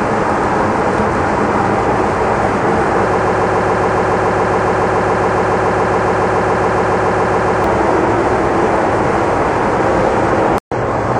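A broken-record loop runs from 3.19 s to 7.64 s: a 140 ms fragment repeats exactly, back to back, about 32 times, giving a rapid, mechanical stutter at roughly seven repeats per second. The likely cause is a stall in the player, encoder or stream that kept resending the last fragment it held. Whatever should have played across those four and a half seconds is lost.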